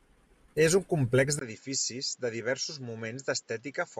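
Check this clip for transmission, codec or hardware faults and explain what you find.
One fault is audible, a change of input partway through the speech.

Input switched to a poorer device, from 1.39 s to the end, right after "un complex": the recording likely moves from one microphone to a lesser one mid-take. A gap of about 20 ms marks the switch. After it, the speech has nothing above 7.6 kHz, so it turns duller and boxier. The level falls by roughly 5 dB, and a new background noise sits around 40 dB below the speech.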